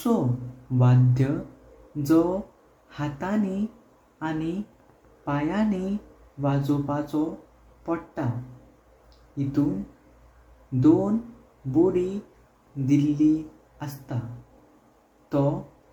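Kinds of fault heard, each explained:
Generation loss: throughout, the speech sounds swirly, hollow and smeared, with blurred attacks, likely from around seven repeated MP3 encodes in what fits a 96 kbit/s chain. One pass at that rate wouldn't pile up this much, and content still reaches 20.1 kHz.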